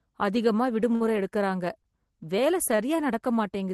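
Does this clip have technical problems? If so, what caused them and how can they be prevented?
Yes. The speech has three short stalls from a late packet, at 0.95–1.04 s, 1.82–1.87 s and 2.76–2.81 s. Each time, the jitter buffer ran empty. The last sound was held for 52, 15 and 28 ms, then resumed. Nothing is lost. A deeper jitter buffer or a steadier network would prevent it.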